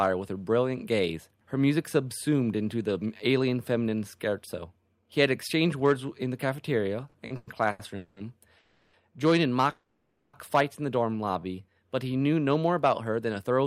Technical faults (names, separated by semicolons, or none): repeated stalls (stutter); call audio freeze; jitter buffer slow-down; jitter buffer speed-up